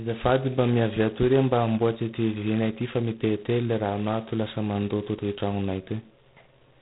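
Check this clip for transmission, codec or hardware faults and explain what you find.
One codec fault runs through the whole recording: heavy G.726 ADPCM damage. From start to finish the speech is cut off above 3.9 kHz and carries a harsh, rasping hiss that rises and falls with the speech level. ADPCM sends only a few bits per sample describing the error of an adaptive prediction. Here the coarseness points to the 16 kbit/s mode, which fits 2 bits per sample, so the quantisation noise is loud. Plain band-limiting would sound muffled but clean. A steady background hiss would not track the level. Unlike the warbly, tonal artefacts of frame-based codecs, this roughness is grainy and continuous.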